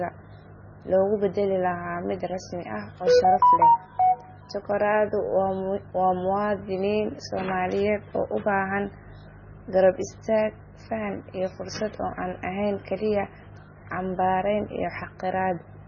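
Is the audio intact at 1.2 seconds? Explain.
No. At 1.2 seconds, as across the whole speech clip, MP3 compression damage is present, likely from a very low bitrate in the region of 16 kbps. Starved of bits, the encoder removed everything above 6.9 kHz and dropped weak frequency lines that flicker between frames, leaving a heavily watery, swirling sound with metallic chirps on s sounds and softened attacks.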